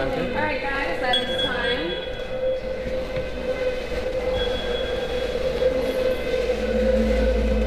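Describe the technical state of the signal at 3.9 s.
At 3.9 s the signal is inside a jitter buffer speed-up running from 3.66 to 4.28 s: the receiver trims an overfull buffer by cutting out short pitch-period chunks, about 150 ms in all, so the sound plays at 122% speed with unchanged pitch and feels hurried. A spectrogram shows harmonics at the same frequencies but compressed in time, and the waveform shows repeated cycles spliced out.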